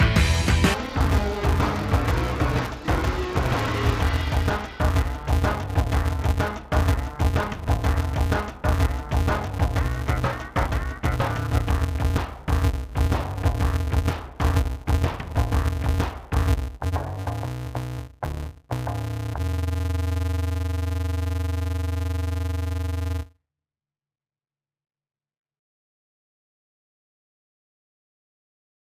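From 0.74 s to the end, the audio turns dull and robotic. A steady buzz sits under it at about 188 Hz. There is no clear drop in pitch. This is interleaved audio read as planar. Each short block of alternating left and right samples is split in half, and each half is played as one channel. The blocks last 5.33 ms, which fits a 256-sample block. That block rate sets the buzz.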